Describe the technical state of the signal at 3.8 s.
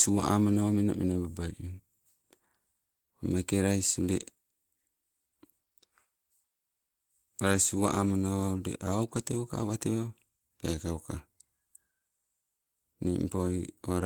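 At 3.8 s the signal sits inside repeated timing corrections running from 0.50 to 13.94 s, where small repeated slices stretch playback to 98% speed, adding roughly a fifth of a second in total. These are slight, uneven hiccups rather than dropouts or a steady pitch shift. The cause is clock drift between sender and receiver: the sender's clock runs about 1.5% slow, so the receiver's buffer keeps draining and must be topped up continually. Because the drift persists, the hiccups recur at irregular spacing, unlike isolated packet-loss gaps.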